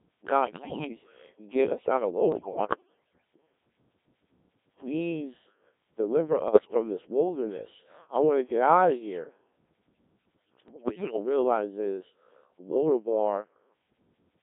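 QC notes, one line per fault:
Throughout: Codec 2 vocoder. Speech is rebuilt from sine waves at what sounds like about 1.3 kbit/s, giving a robotic buzz. A spectrogram shows smeared synthetic harmonics confined to 300 Hz–3.5 kHz.
0.45–0.88 s, 2.32–3.20 s (after "get us out of"), 6.48–6.74 s (before "this wilderness I want"), 10.68–11.16 s (before "realize is"): bit errors on digital voice radio. Corrupted frames cause pitch jumps, warbles and bleeps. They appear as erratic harmonic steps and level spikes.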